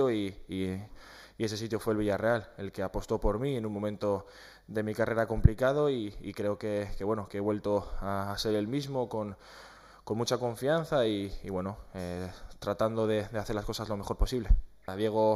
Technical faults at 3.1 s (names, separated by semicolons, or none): channel delay (comb filtering)